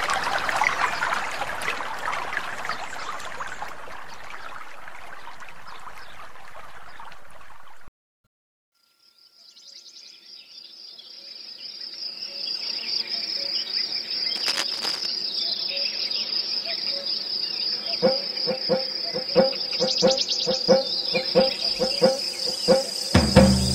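From 14.36 to 15.06 s, a burst of cable scratch noise sits over the sound. It is a dense, ragged scratching and rustling, only a little quieter than the main signal. It lasts about 0.7 s and then stops. The likely cause is a worn cable, connector or control being moved. Its contact resistance jumps around quickly as it shifts, and those rapid changes come through as uneven bursts of noise.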